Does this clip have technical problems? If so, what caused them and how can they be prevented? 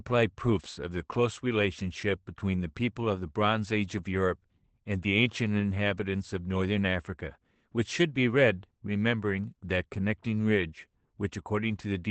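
Yes. Lost packets rebuilt from error correction cause brief rough, noisy patches at 1.79–1.85 s, 3.97–3.99 s and 5.59–5.61 s. The first lasts about 40 ms, consistent with two lost packets; the others fit single 20 ms packets. The Opus decoder filled each gap with the low-bitrate copy carried in the following packet, so nothing drops out, but those stretches sound coarser. Reducing packet loss on the network, or raising the bitrate so the redundant copies are less degraded, would prevent this.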